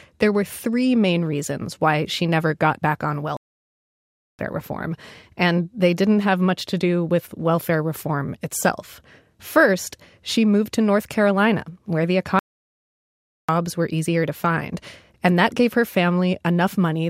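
Two playback stalls break up this speech: at 3.37 s, right after "never got back on", the sound cuts out for about 1.02 s before resuming with "reform and they didn't", then again at 12.39 s after "where the", silent for 1.10 s until "were easier to find". Likely the player starved for data each time.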